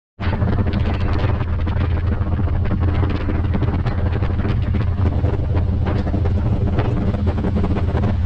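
A hollow, phasey colouring runs through the whole clip: channel delay (comb filtering). One channel sits roughly 10 ms behind the other, so summing to mono cancels a comb of notches starting near 50 Hz and repeating about every 100 Hz.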